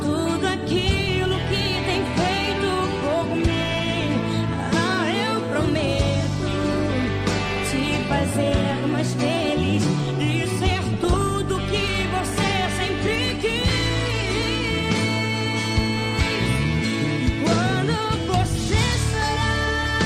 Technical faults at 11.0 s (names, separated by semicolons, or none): DAB burbling